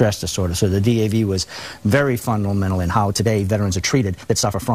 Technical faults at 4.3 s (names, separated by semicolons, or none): time-stretched section